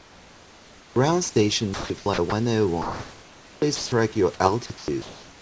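From 0.00 to 0.96 s the room background is replaced by a smooth, featureless hiss about 3 dB quieter than the real noise floor: comfort noise in place of the background, likely from discontinuous transmission, with the receiver synthesising noise while the sender stays silent.

Between 1.74 and 2.32 s the sound is chopped by the voice detector. The detector, likely misjudging quiet syllables and word edges as silence, toggles sending off and on, so the sound turns choppy.

Comfort noise in place of the background returns from 2.82 to 3.92 s, again a steady, detail-free hiss, likely inserted because the detector judged the stretch to be background. Inside it, from 3.76 to 3.92 s, the sound is dropped by the voice detector: about 80 ms of quiet sound is cut, most likely taken for background, and plain noise fills the gap until transmission resumes.

From 4.66 s to the end at 5.41 s the sound is again chopped by the voice detector, likely from the same on-off switching, with fragments of sound alternating with synthetic fill. 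Throughout, the call path band-limits the audio, with nothing above 8 kHz, which fits a wideband codec such as G.722.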